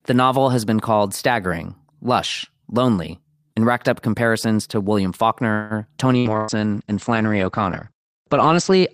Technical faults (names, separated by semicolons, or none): call audio freeze; call bitrate drop; burst of packet loss